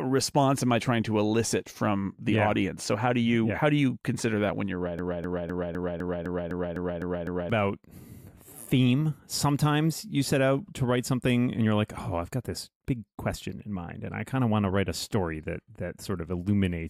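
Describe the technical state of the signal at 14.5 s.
At 14.5 s the speech signal is intact, with no audible dropout, distortion, glitch or other technical fault at that moment.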